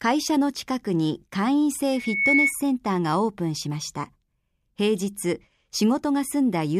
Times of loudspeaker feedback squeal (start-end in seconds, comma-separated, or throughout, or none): 1.93-2.55